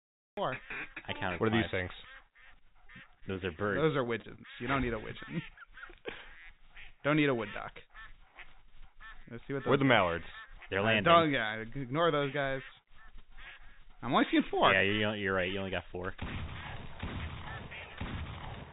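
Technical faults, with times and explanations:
0.00–0.37 s, cut-off start: the audio opens from digital silence and begins abruptly at 0.37 s, partway into a sound, with no natural attack or fade-in.
2.54–3.38 s, repeated packet loss (robotic sound): six gaps in quick succession, the longest 21 ms, about 80 ms missing in all. Each is patched by extending the previous sound, giving a choppy, robotic texture.
4.04–4.08 s and 4.22–4.26 s, short concealed packet loss: each time, 20 ms failed to arrive and was filled by continuing the preceding sound. The result is a brief smear or wobble where the original audio is missing.
4.36–4.40 s, short stall from a late packet: the jitter buffer ran empty, so the last sound was stretched by 28 ms until the packet arrived. Nothing is lost, but the sound is held slightly too long.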